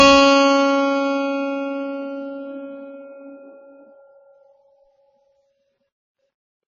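A short piece of music, and the whole thing carries AAC compression damage. The top end is cut off, so it sounds dull and boxed-in, and the remaining band is heavily smeared, with a warbly, fizzy texture where sustained sounds should be steady. That's the encoder starving the spectrum, likely an AAC-LC encode at a very low bitrate, around 16 kbps, dropping the top end and coarsely quantising what's left.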